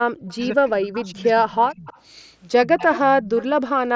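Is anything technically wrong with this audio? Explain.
Yes, the speech has two kinds of fault.

Speech suppressed in double talk occurs from 0.08 to 1.88 s (about one and a half seconds affected), from 2.66 to 2.88 s and from 3.14 to 3.37 s. The voice sinks by up to about 35 dB in the first and last stretches and about 15 dB in the middle one. The likely cause is an echo canceller treating simultaneous far-end talk as echo and attenuating everything. On a waveform the envelope caves in. On a spectrogram the speech energy fades or breaks apart, with the band already ending near 8 kHz through the mSBC headset path.

Echo leak appears at 0.28–0.36, 1.87–2.01, 2.92–2.99 and 3.37–3.46 s as delayed copies of the voice. The first trails by 147 ms at about −35 dB. The later ones trail by 171 ms at about −25, −15 and −25 dB. These copies are likely loudspeaker pickup the canceller failed to remove. 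A spectrogram shows repeats of preceding patterns offset in time.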